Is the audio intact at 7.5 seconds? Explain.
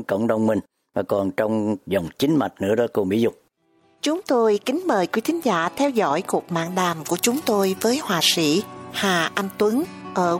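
No: pre-emphasis left on from 6.66 to 10.02 s, a 50 µs FM-style treble boost never undone, lifting 10 kHz about 11 dB, so the sound is thin, bright and sibilant.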